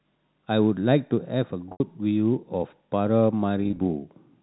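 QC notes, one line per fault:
1.72–1.80 s, packet loss with pitch repetition: an 80 ms gap bridged by repeating the last pitch period, which buzzes briefly, fades to silence, then cross-fades back in.
3.61–3.79 s, packet loss with pitch repetition: 100 ms lost in short bursts of up to 20 ms each, so the sound stutters with quick, slightly held buzzy bits.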